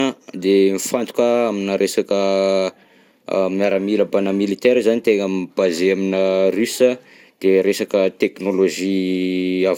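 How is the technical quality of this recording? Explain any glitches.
The technical quality is poor throughout, because of generation loss. The speech was likely re-encoded around ten times with a lossy codec, consistent with MP2 at 128 kbit/s. Each pass stacked fresh quantisation noise on a shifted frame grid, leaving a swirly, hollow, smeared sound with blurred attacks and nothing above 18 kHz.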